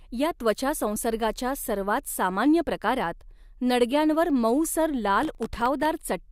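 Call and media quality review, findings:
Gritty crackling tear riding on the speech, 5.23–5.86 s. Processor overload crackle: CPU missing buffer deadlines; gaps sound like dozens of hard-edged silences, consistent with sub-millisecond buffers.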